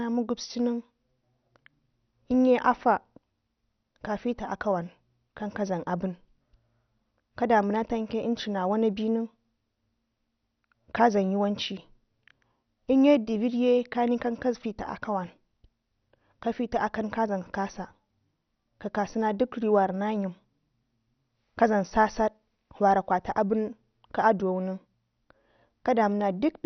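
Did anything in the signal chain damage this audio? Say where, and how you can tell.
Yes. The speech is dull and gurgling throughout, with nothing above 6.1 kHz. This is likely MP2 compression at the codec stage, its upper sub-bands dropped, which fits about 48 kbps.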